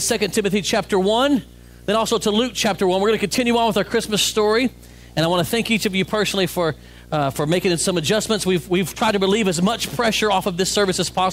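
Video or display buzz runs through the whole recording, a steady 60 Hz buzz with a layer of hash above it, sitting roughly 25 dB below the audio. The buzz rate matches a 60 Hz picture field rate, which points to a monitor, screen or video cable coupling interference into the audio path. Rerouting the audio cabling away from the display and its video lines, or fixing a ground shared between them, would remove it.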